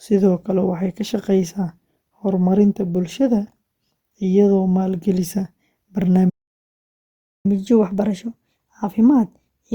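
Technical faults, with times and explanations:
6.29 to 7.46 s, playback stall: the player most likely ran short of buffered data or had its output thread held up, so nothing reached the output for about 1.15 s. The speech simply breaks off mid-flow into silence, then picks up again.
7.46 to 9.74 s, catch-up at higher speed: once output resumes, the player works through the backlog it built up during the stall by resampling it 1.1 times faster. Through to the end of the clip the speech runs quicker and sits roughly a semitone and a half higher.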